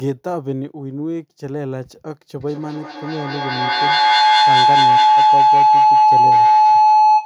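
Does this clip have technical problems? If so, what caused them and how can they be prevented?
Yes. From 2.4 s to the end, a feedback howl near 1 kHz swells, pulsing about five times a second and peaking around 12 dB above the speech. Sound looped from loudspeaker back into microphone, gaining level each pass. Muting one device or using headphones prevents it.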